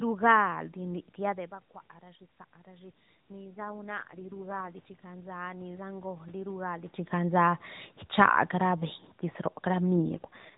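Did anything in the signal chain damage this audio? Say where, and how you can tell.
Yes. In the call processing, the automatic gain rising stage wound its gain up by about 11 dB from 1.98 to 6.99 s after the input fell about 15 dB as the talker moved back. Voice and room noise swell together slowly across those five seconds.

At the codec and network stage, an AMR rate drop occurs twice, at 3.43 to 4.73 s and at 9.96 to 10.56 s. There is no gap and no band change, but the voice turns buzzy and synthetic, which fits the network forcing AMR from 12.2 down to 4.75 kbps.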